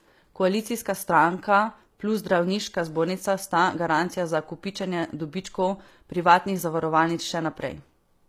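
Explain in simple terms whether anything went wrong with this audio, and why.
Throughout the recording, the s sounds and other hissy parts of the speech come out gritty, metallic and lispy. The likely cause is HE-AAC compression, which keeps the lower tones and then fakes the treble by copying them upward, so the rebuilt high end never quite matches.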